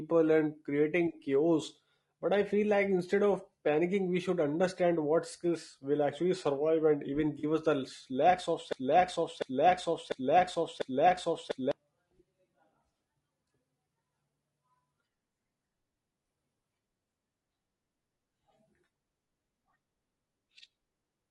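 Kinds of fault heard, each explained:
Low-delay AAC compression: The speech has likely been through AAC-ELD, the short-frame codec used for video calls, at a low rate that fits roughly 32 kbps. Its brief frames resolve pitch harmonics poorly and spend bits inefficiently. Throughout the clip the damage is plainly audible: the voice sounds rough and grainy, noise fills the gaps between harmonics, and the upper band sounds thin and synthetic rather than natural.
AAC frame loss with concealment: Compressed frames failed to arrive, and the decoder filled the gap by reusing the last good spectrum with altered phase or smoothed energy instead of leaving silence. The patch runs about 40 ms, which fits two lost frames, from 7.39 to 7.44 s, just after "actually survive and even" and before "us the lakhs of". Because the gap is so short, it comes across as a brief smeared, noisy blur rather than a dropout.
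Broken-record loop: The playback or stream stalled, likely at the player or encoder, and kept resending the last chunk it held. Right after "us the lakhs of", from 8.73 to 11.71 s, a fragment about 0.70 s long repeats exactly, back to back, four times. The speech that belonged in those three seconds never plays, so the sentence jumps ahead once the loop releases.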